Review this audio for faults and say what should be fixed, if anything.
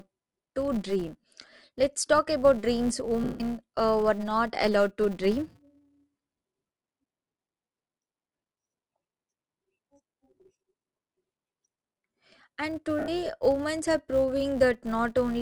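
The speech has a grainy, breathy edge across the top end for the whole clip, likely from Bluetooth LC3 compression. The codec strips upper-band detail and papers over it with noise, consistent with 10 ms frames at a modest rate around 48 kbps. Push the link to a higher LC3 bitrate or record locally instead of over Bluetooth.

There's a steady 200 Hz buzz riding on the speech and tracking its level, which is a filter restarted on every block. Each roughly 5 ms block starts from zeroed state and kicks out a little transient. Carry the filter state across blocks rather than resetting it.

Lost LE Audio frames show up twice. From 3.24 to 3.40 s, after "talk about dreams" and before "uh were not allowed", 160 ms turns into a noisy smear. At 12.99 to 13.08 s, just before "women are", a 90 ms gap does the same. The decoder is repeating the last spectrum with scrambled signs. Improve the radio link or add retransmission margin so fewer frames drop.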